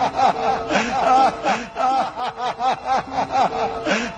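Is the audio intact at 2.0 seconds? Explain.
No. A doubled audio track is already under way when the clip starts and runs until 2.2 s, likely because the sound was captured a second time through a slower path. A full-band copy, roughly 5 dB quieter, trails about 0.7 s behind, dry, and stops abruptly.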